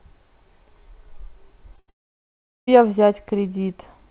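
At 1.76 s, a short concealed packet loss begins. About 20 ms of speech did not reach the decoder in time. The receiver covered the hole by extending the sound just before it, then blended back into real audio by 1.8 s. It is heard as a brief smear or wobble. The narrow, telephone-like sound, with nothing above 4 kHz, fits a G.711 A-law call path.

From 1.8 s to 1.9 s comes a burst of packet loss. About 80 ms in a row went missing. The receiver kept extending the last sound and lowered it as the gap went on. A voiced sound turns into a held buzz here, and an unvoiced one into a fading hiss. The speech that belonged in this stretch is gone, not delayed.

From 1.9 s to 2.69 s there is a long gap of about 780 ms. Its likely cause is a long network dropout, with no packets arriving at all. The receiver keeps extending the last sound, which fades out. Most of the gap, about 750 ms, is plain silence. 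The speech then picks up further on, and everything from that stretch is missing.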